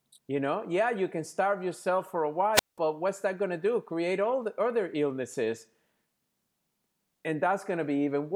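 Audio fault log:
2.53–2.78 s, wireless microphone squelch dropout: a brief surge of hiss, then a 186 ms hole of near silence before the speech returns. The analogue FM microphone's radio signal faded, so the receiver's squelch muted its output until reception recovered.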